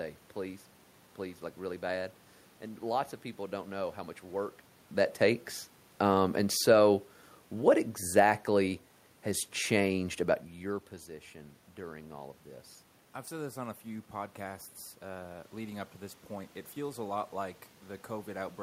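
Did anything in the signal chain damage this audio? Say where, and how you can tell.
Yes. The automatic gain control in the call-processing stage judged the input too loud or its background noise too strong and pulled its gain down by about 3 dB, easing it lower from 7.53 s to 10.48 s, between "and so" and "your position during all". Because the cut is applied to the whole signal, the speech and the room noise sink together. That shared drop is how it differs from the talker moving around 4.5 s and 10.5 s, where only the voice changes level.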